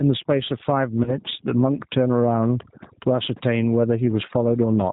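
Throughout the speech, overdone noise removal leaves near-silent gaps flecked with twinkling specks; a spectrogram shows scattered isolated dots amid empty patches.

The level also swings by about 15 dB, likely gain pumping from excessive input gain feeding a fast limiter; the waveform shows flattened peaks.

The G.729 codec is plainly audible: rough, slightly synthetic speech with nothing above 4 kHz, seen on a spectrogram as a hard ceiling there.

From 1.04 to 1.17 s, VoIP packet loss concealed by the speech codec turns a gap of about 20 ms, consistent with two lost frames, into a stretched, fading sound. The voice stays weak or distorted afterward, visible as smeared harmonics and a dip in the envelope.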